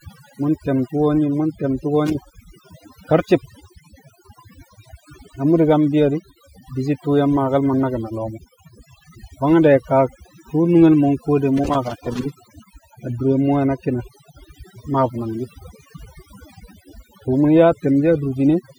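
Throughout, the background sits in near silence flecked with twinkling specks: overdone noise removal, pushing bands near the noise estimate down along with quiet speech detail. From 2.06 to 2.41 s and again from 11.57 to 12.79 s, irregular bursts of crackle and scratching break in: loose connector crackle, a worn or dirty contact rapidly making and breaking, chopping the signal.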